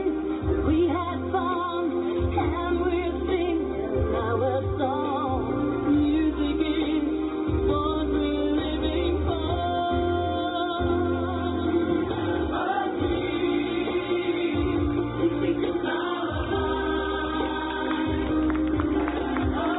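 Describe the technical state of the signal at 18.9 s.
At 18.9 s the signal is intact, with no dropout, glitch or distortion, only the narrow telephone-band sound of the call codec, which passes nothing above 4 kHz.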